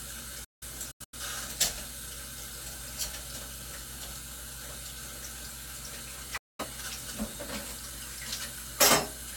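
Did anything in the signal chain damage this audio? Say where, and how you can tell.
Yes, at the reception stage: a digital broadcast dropout, twice. From 0.44 to 1.17 s the sound breaks into several short holes, totalling about 0.34 s of silence, the longest 0.17 s. From 6.37 to 6.65 s it falls silent again for about 0.21 s. Each cut fades out in about 8 ms. The receiver muted when frames failed to decode, which points to a handful of lost frames. The missing sound never returns.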